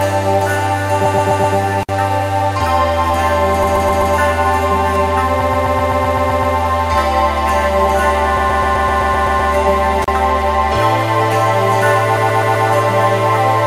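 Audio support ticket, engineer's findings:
Repeated frames, music track: stutter loops at 1.04–1.56, 3.63–4.14, 5.40–6.55, 8.36–9.51 and 12.16–12.67 s. The same 128 ms chunk replays back to back, 4 extra times on the short runs and 9 on the two long ones. Probable component: the storage or transport layer resending a block of compressed frames. It adds about 3.8 s in total.

Intermittent contact, analogue connection: dropouts at 1.81–1.89 s (open about 56 ms) and 10.02–10.08 s (about 34 ms). Crackle at both edges of each gap, with faint hiss while the line is open. Probably a loose plug or a tired cable. I'd reseat or swap leads first and wiggle-test the connectors.

Bit error spike at 4.96 s: a single sharp broadband tick, unrelated to the music and gone instantly. It's a flipped bit landing on a couple of samples, so the sample value leaps by a power of two and snaps back. Points at memory or a digital link. 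It's one event, so it's worth watching for recurrence before chasing hardware.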